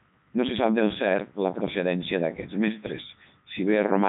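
From start to finish the speech passes through a Codec 2 vocoder, heavily damaged. Only pitch, voicing, energy and a coarse spectral envelope survive, and the decoder rebuilds the voice from sine waves, so it sounds robotic and buzzy, with nothing above 3.8 kHz, which fits the codec's 3.2 kbit/s top mode.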